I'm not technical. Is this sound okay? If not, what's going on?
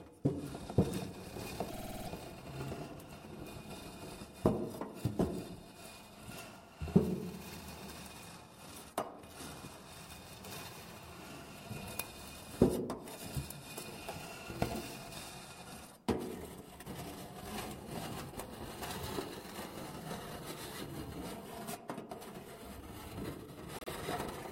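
No. Repeated frames: a short piece, about 50 ms long, replays as a stutter, seven extra times at 1.69 to 2.08 s and twice at 23.76 to 23.90 s.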